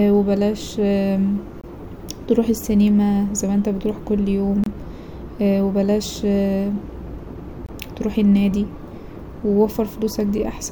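Speech with a gap between chunks: 25 ms holes at 1.61, 4.64 (after "ما أنت بتروح كل") and 7.66 s (before "تروح النادي"), every 3 s.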